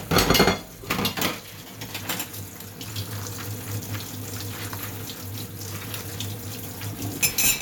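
No technical faults can be heard anywhere in this audio.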